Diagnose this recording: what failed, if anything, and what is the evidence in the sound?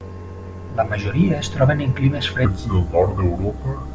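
A wrong sample rate at the playback stage: from 2.45 s to the end at 3.94 s the samples run at a slower clock with no conversion, which fits 22 kHz material played at 16 kHz. The speech drops about 5.5 semitones and slows to 0.73 times normal speed, sounding low and dragged.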